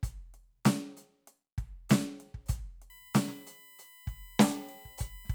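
Current drawn by the USB bus in 1 ms frames leaks into the audio through the shared power or ground, producing USB whine from 2.90 s to the end of the clip. The pulsing at a 1 ms rate sets a fundamental at 1 kHz, but the strongest component is its harmonic at 2 kHz, so the whine sounds higher than the frame rate alone suggests. It holds a fixed pitch beneath the music, about 25 dB below it.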